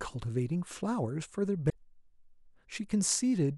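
A speech clip with one brief fault, from 1.69 to 1.73 s. At that point the sound skips forward, and the next 40 ms or so come out garbled. The likely cause is a broken MP3 bit reservoir. MP3 frames can store part of their data in earlier frames. When frames are lost, the frame after the gap reads the wrong bytes. The disturbance spans about one to two frames, which fits frames of roughly 26 ms.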